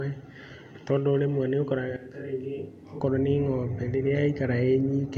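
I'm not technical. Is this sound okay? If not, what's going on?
No. From about 1.97 to 3.00 seconds, the speech suddenly sounds far away. It turns hollow and roomy, loses its warmth, and drops noticeably in loudness. The room's background noise comes up under it. At 3.00 seconds the close, full sound snaps back. This is most likely a switch to a distant microphone: the close microphone dropped out for that second, and a mic further from the speaker picked up the speech instead.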